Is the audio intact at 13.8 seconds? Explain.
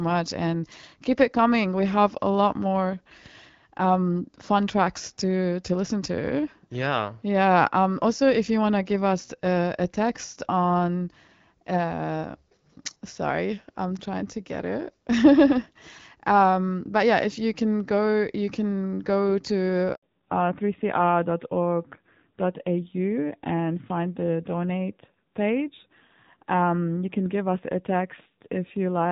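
Yes, at 13.8 seconds the speech is intact, carried through the AMR wideband (HD Voice) codec at 12.65 kbit/s, a rate at which that codec keeps speech clear.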